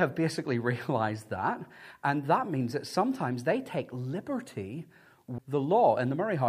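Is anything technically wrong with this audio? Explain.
Yes, there's a CD skip at 5.38 s, right after "sometimes they take liberty". The laser got knocked or hit a flaw and jumped to another turn of the spiral, so you get a muted tick of roughly 7 ms, then the speech carries on from a different spot on the disc.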